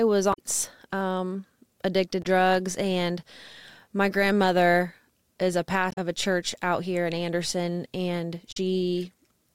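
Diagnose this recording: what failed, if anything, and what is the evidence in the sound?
The fault is damaged data in a compressed stream, at the codec or storage stage. Four short glitches break into the speech at 0.30–0.39 s, 2.20–2.26 s, 5.89–5.98 s and 8.49–8.57 s, each lasting about 60 to 90 ms. Corrupted bytes made the decoder misread those frames, lose sync and hunt for the next valid header. On a spectrogram each event is a hard-edged block of garbled spectral content. The waveform shows abrupt, unnatural segments that don't fit the surrounding speech envelope.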